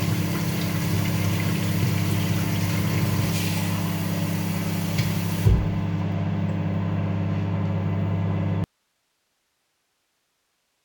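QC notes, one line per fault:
8.64 s to end: audio dropout to a faint residue. The sound cuts off abruptly rather than fading and does not return. The gap holds only steady hiss, about 50 dB below the signal level. The wanted signal was likely lost upstream while the path after the break stayed live, so the remaining gain stage passes its own noise floor. The hard edge and constant hiss rule out a natural pause or fade-out.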